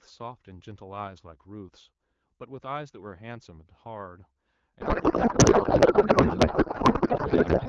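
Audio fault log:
4.81 s to 7.69 s, codec payload misread: from 4.81 s to the end, the speech gives way to garbled noise and warble that barely tracks it, after clear AMR-WB speech at 12.65 kbit/s. The two ends disagree on how the AMR bits are packed. That fits octet-aligned frames being read as bandwidth-efficient, so the decoder pulls pitch, pulse and gain fields from the wrong bit positions and builds plausible-looking but meaningless frames.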